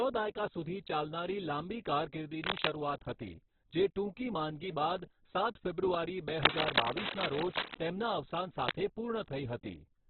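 Throughout, the speech sounds rough, grainy and dull, with nothing above 4.4 kHz. This is likely heavy Opus compression, pointing to a bitrate near 8 kbps.

From 6.38 to 7.75 s, dense, uneven scratching rides over the speech, about 5 dB louder than it. This is likely cable scratch noise from a worn, moving contact.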